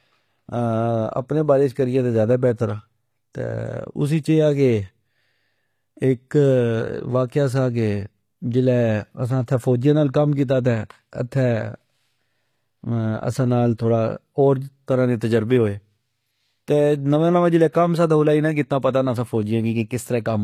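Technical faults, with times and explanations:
Throughout, HE-AAC compression: the speech keeps a bright top end, but s sounds come out gritty and lispy, likely because the treble is rebuilt from copied lower bands at a bitrate near 24 kbps. Unlike plain band-limiting, the highs are present, just synthetic.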